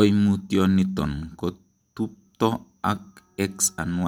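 No technical faults occur at any point in the recording, so there is nothing to describe in time order.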